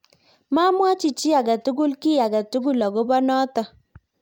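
Nothing in this speech clip stands out as a technical fault, so there's nothing to flag here.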